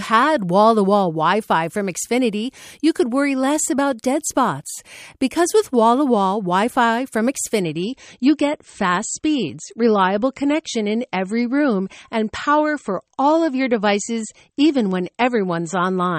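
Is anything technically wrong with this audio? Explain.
Yes. Adaptive stream at a lower bitrate, from 7.6 s to the end at 16.2 s: the player switched to a leaner encoding, which fits a drop from 128 to 32 kbit/s MP3. With no gap, the speech suddenly loses everything above 8.4 kHz and turns swirly and smeared.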